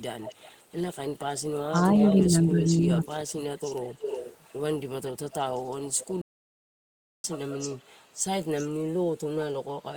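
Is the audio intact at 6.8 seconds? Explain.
No. At 6.8 seconds the output has stopped in a playback stall that runs from 6.21 to 7.24 s, about 1.02 s of silence. The speech cuts off mid-flow and then resumes, most likely because the player ran out of data or its output thread was blocked until it recovered. On a waveform this is a flat, silent stretch between those times. On a spectrogram it is a fully blank vertical band with hard edges on both sides.

The same moment also falls inside an echo leak spanning 5.06 to 7.78 s. It is inaudible at 6.8 s itself because the stall silences everything, but it is heard on either side. A faint delayed copy of the speech trails the original by 380 ms, roughly 20 dB quieter. The likely cause is a far-end loudspeaker whose echo canceller let part of the microphone pickup return. On a spectrogram the speech harmonics reappear 380 ms later as a dimmer, shifted duplicate. 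The waveform shows a small secondary envelope trailing the speech.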